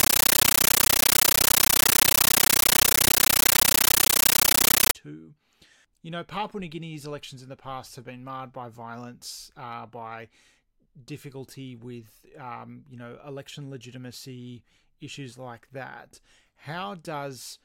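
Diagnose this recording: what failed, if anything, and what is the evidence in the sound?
At the playback stage, a compressed stream was played as audio: an undecoded AC-3 bitstream on the digital link was treated as PCM. From 0.0 to 4.95 s the speech is replaced by loud, chattering static, 13.3 ms noise bursts repeating at 31.25 Hz, which fits Dolby Digital frames.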